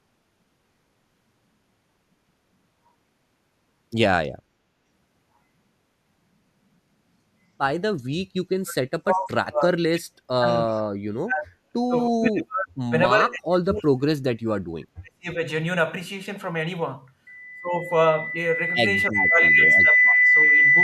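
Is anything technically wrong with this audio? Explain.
Yes, there are two problems. From 8.02 to 10.47 s, 10.66 to 12.93 s, 13.16 to 15.41 s and 19.1 to 20.56 s the speech sinks, by around 40 dB at worst (nearer 25 dB in the last stretch). That's likely speech suppressed in double talk, where the echo canceller mistakes overlapping far-end audio for echo and clamps down.

Then from 19.14 to 19.21 s there's a faint echo leak, a quick delayed copy of the speech about 30 dB down, trailing by 324 ms. It's likely loudspeaker pickup that the far end's echo canceller didn't fully remove.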